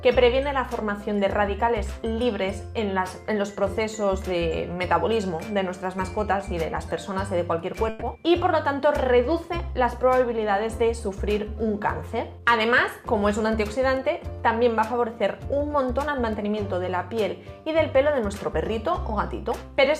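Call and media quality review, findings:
Burst of packet loss, 7.89 to 8.03 s. Network or jitter buffer: packets lost or late, receiver concealment covering a 120 ms gap. Last sound extended and faded, so a held buzz or fading hiss, no silence. Resumes 120 ms further on; that stretch of audio missing.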